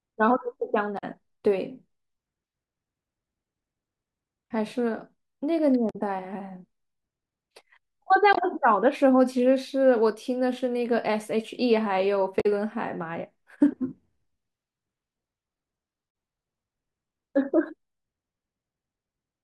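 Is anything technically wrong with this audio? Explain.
Yes. Short chirps or squawks break through the speech at 0.97, 5.89, 8.33, 12.40 and 16.07 s, each lasting roughly 25 to 65 ms. This is damaged data in a compressed stream: corrupted bytes make the decoder misread frames and lose sync until it finds the next valid frame header.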